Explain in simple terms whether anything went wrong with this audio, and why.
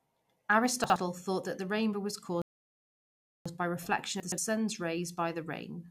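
Around 0.84 to 0.96 s, and again from 4.20 to 4.38 s, the speech briefly sounds jumbled. These are chunks out of order: short slices of audio, each about 60 ms long, play after the slices meant to follow them. The second spot sounds like a slice arriving two steps late. Nothing is lost, but the order is wrong.

At 2.42 s the speech drops to silence, then resumes at 3.46 s exactly where it left off, adding just over a second. This is a rebuffering stall: the player ran out of downloaded audio and paused until more arrived.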